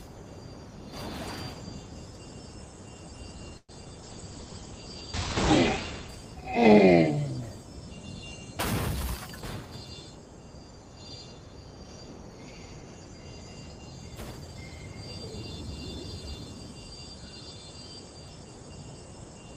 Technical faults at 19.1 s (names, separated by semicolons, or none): none